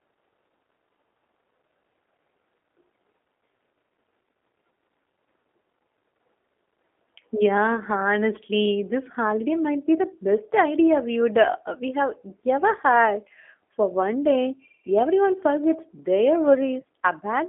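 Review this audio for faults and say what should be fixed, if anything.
The whole clip has the G.729 codec sound: band-limited to roughly 250 Hz to 3.5 kHz, with a rough, synthetic edge that fits 8 kbit/s pulse-based reconstruction. Routing the call over a wideband codec like G.722 or Opus would avoid it.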